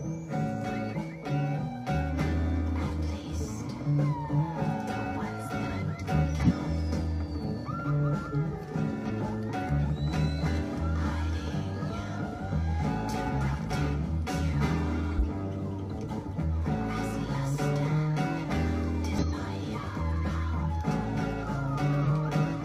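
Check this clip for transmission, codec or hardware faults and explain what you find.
There are six compressed frames skipped, at 6.37–6.51, 9.06–9.12, 15.14–15.24, 16.07–16.13, 19.18–19.24 and 22.02–22.09 s. Whole codec frames go missing, so the sound jumps ahead by about a twentieth to a fifth of a second.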